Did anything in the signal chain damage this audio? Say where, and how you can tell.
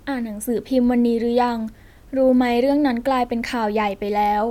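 No, nothing in the signal chain has damaged this speech recording. No stage between capture and playback leaves an audible fault in the signal.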